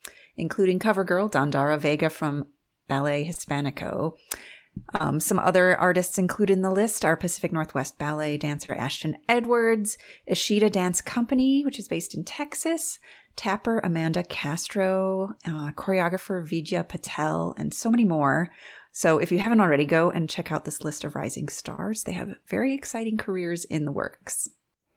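Short concealed packet loss: about 20 ms of speech (40 ms at 4.96 s) arrived too late, and the decoder extrapolated across each gap, leaving brief smears or wobbles at 3.33, 3.37 (slightly stretched), 4.96, 8.66, 15.56, 19.42 and 21.76 s.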